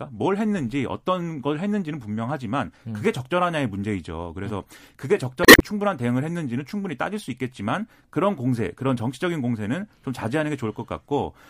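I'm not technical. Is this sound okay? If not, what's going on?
No. Damaged data in a compressed stream hits from 5.42 to 5.62 s: part of the stored speech file got corrupted, so the player misread those bits, briefly lost its place, and had to hunt for the next good chunk. That produces a short squawk or blip.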